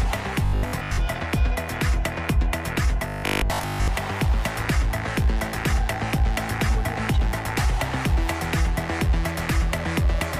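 From 0.45 to 0.99 s and again from 3.08 to 3.88 s, the sound collapses into a rigid, metallic 50 Hz buzz: robotic sound from repeated short buffers. The likely cause is audio arriving too seldom, so the player loops a 20 ms slice in place of most of the real signal. Unlike plain dropouts or clicks, nothing falls silent. The buzz pitch stays locked at 50 Hz while the underlying sound's contour still shows through.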